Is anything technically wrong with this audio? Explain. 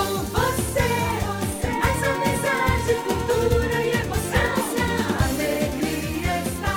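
No, nothing is technically wrong with this audio.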